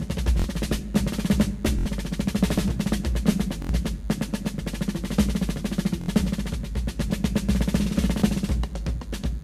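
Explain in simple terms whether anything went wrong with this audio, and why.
Under the whole piece of music runs a faint, thin, steady buzz. This is DECT cordless phone buzz: a cordless phone or its base station nearby sends a short radio burst 100 times a second, and the audio electronics pick it up and turn it into sound. That is why it sits at a fixed low pitch with a harsh, edgy quality that never changes with the music.

There are also five brief stutters, at 0.40, 1.79, 3.62, 6.01 and 8.20 seconds, each like a tiny catch or buzzy blip. These are repeated buffers. The playback device ran out of fresh audio for a moment, so it replayed the last short chunk it had, about 23 ms long, which fits a 1024-sample buffer. That chunk plays two extra times at 0.40 s, three extra times at 1.79, 3.62 and 6.01 s, and once more at 8.20 s. Each stutter replaces a few hundredths of a second of the real music.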